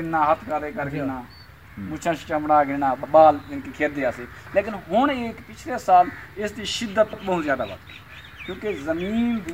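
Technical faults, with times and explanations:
3.03 s and 7.13 s, overlapping chunks: each 4-second chunk starts 100 ms early, so that slice plays twice, heard as a brief stutter at each join.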